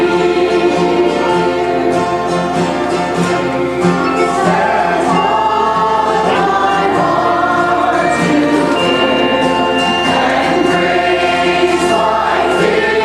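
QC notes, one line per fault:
Throughout, video or display buzz: a steady 75 Hz buzz with a gritty hash above it sits roughly 20 dB below the programme, the sound of a screen or video cable coupling its picture field-rate interference into the audio path.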